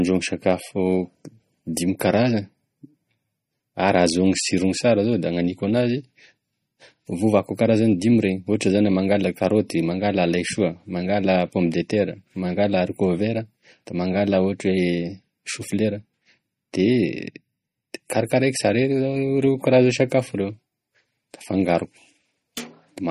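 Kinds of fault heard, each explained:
MP3 compression: The audio has no content above 15.1 kHz and plainly audible coding damage throughout the speech, most likely from MP3 encoding at a bitrate as low as 32 kbps. With so few bits, the encoder cuts off the treble at a fixed point and drops quieter frequency components that flicker in and out between frames. This gives sibilants a watery, swirling quality with metallic chirps, and consonant onsets sound smeared rather than crisp.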